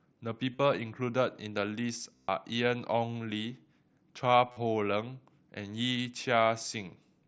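Speech with concealed Bluetooth headset packet loss at 0.53–0.59, 2.16–2.29, 4.52–4.57 and 6.05 s. The receiver fills the gaps by repeating recent waveform. On a spectrogram this shows as flat, evenly striped harmonics, and on the waveform as copied cycles. It is most audible as a steady buzz through the 0.13 s run at 2.16 s.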